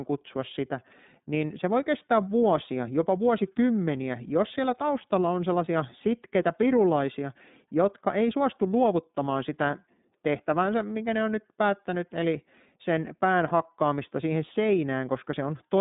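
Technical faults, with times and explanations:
Throughout, iLBC codec: the sound sits in a narrow telephone band, about 150 Hz to 3.7 kHz, with nothing above 3.8 kHz. Each 30 ms frame is coded on its own, giving a plainly rough, slightly synthetic edge that fits iLBC's 13.33 kbps mode.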